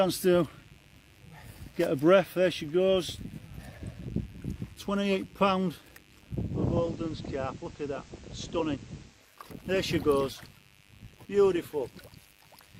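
Mains buzz runs throughout: switching spikes from the 50 Hz supply leak in with harmonics climbing into the kilohertz range, giving a steady raspy buzz well below the sound.

Digital radio blending to analogue occurs from 6.37 to 9.45 s: the receiver cross-fades over about half a second to the FM broadcast, bringing hiss about 30 dB down and a level drop of about 2 dB.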